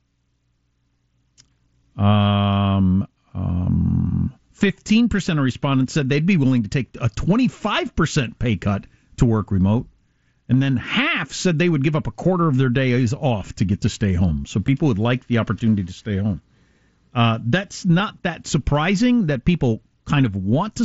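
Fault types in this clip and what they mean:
Concealed Bluetooth headset packet loss: a tiny dropout at 14.67 s and another at 17.99 s, each about 7.5 ms, which points to a single lost packet. The receiver patched each gap by repeating a closely matching stretch of the preceding waveform, so both are nearly inaudible under the mSBC wideband sound.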